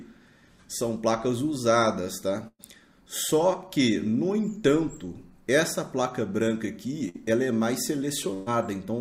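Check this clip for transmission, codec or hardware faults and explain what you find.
Three bursts of packet loss occur, at 2.47–2.62 s, 7.09–7.17 s and 8.34–8.49 s, removing about 120, 60 and 120 ms of audio. The receiver stretches the last sound and fades it (with 40 ms of silence closing the first gap) before the audio resumes further on. The held buzz or hiss and the skipped material distinguish this from a plain dropout to silence.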